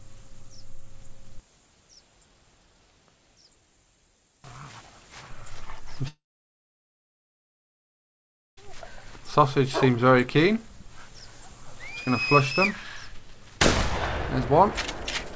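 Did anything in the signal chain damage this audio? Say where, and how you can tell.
Yes. At 6.08 s the sound smears into a fading buzz, then silence until 8.59 s: likely a long network dropout, with the lost audio concealed and then abandoned.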